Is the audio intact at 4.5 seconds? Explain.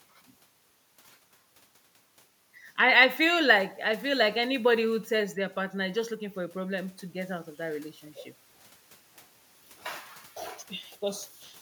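Yes, at 4.5 seconds the speech plays through intact, with no audible fault at that moment.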